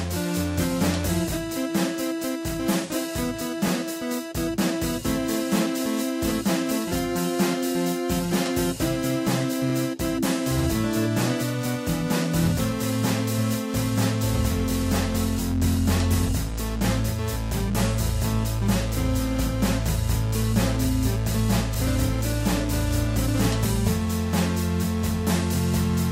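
At 3.68 s and again at 21.75 s there's a tiny stutter from overlapping chunks: the audio was handled in 6-second pieces, and each new piece starts about 23 ms before the previous one finished, so that sliver plays twice and catches your ear as a quick hitch.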